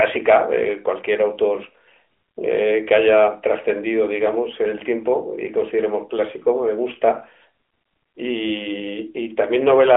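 Nothing stood out on listening; the speech simply carries the narrow, band-limited character of an ordinary mobile call.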